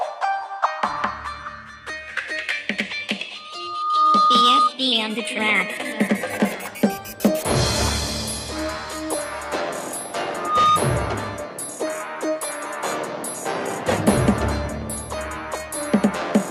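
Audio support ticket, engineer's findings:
Rising 1.2 kHz tone swelling to a squeal, 3.35–4.70 s (builds over most of a second) and 10.30–10.82 s (faster onset), well above programme level. Loudspeaker feedback squeal: mic hearing its own speaker, loop gain above one at 1.2 kHz.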